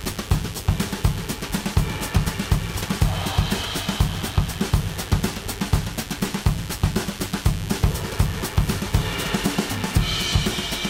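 Sharp switching spikes from the 50 Hz mains supply have leaked into the signal path, twice per cycle, so a mains buzz rich in harmonics sits under the sound for the whole clip, a steady raspy drone roughly 15 dB below the material itself.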